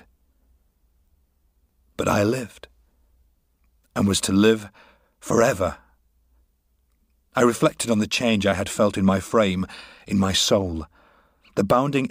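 No technical faults can be heard anywhere in the speech. There is nothing in it that needs a timestamp or an explanation.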